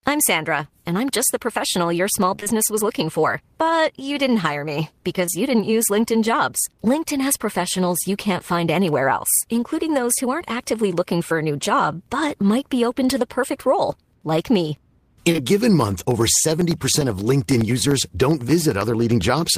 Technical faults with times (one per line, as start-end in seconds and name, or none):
2.35-2.52 repeated packet loss (robotic sound)
5.26-5.29 short concealed packet loss
15.31-15.40 short concealed packet loss
15.81-19.51 periodic USB or driver dropouts